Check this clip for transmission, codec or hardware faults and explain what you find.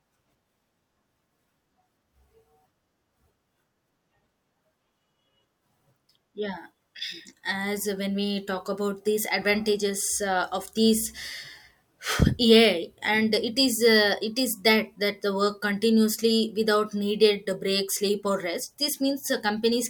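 Nothing stands out here: the speech comes through without any transmission, codec or hardware trouble to point to.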